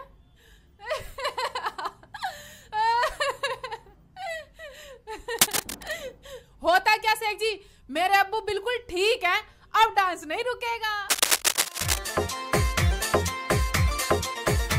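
A worn cable, connector or control being moved is the likely source of the cable scratch noise from 5.39 to 5.92 s and again from 11.09 to 11.98 s. As the contact shifts, its resistance jumps about rapidly, injecting dense, irregular bursts of noise roughly as loud as the sound itself. Each episode is heard as a brief scratching, rustling layer over the audio, the second lasting about 1.7 times as long as the first.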